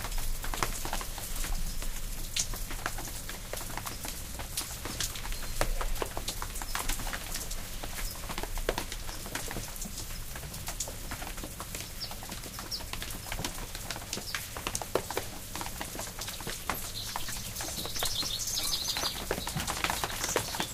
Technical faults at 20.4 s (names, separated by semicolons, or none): none